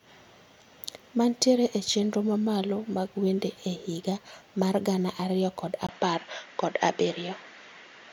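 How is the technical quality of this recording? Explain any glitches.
The recording has one glitch near the end. Input switched to a poorer device, likely, at 5.87 s. After a 20 ms gap the speech turns duller, with nothing above 7.2 kHz, similar loudness, and faint new background noise.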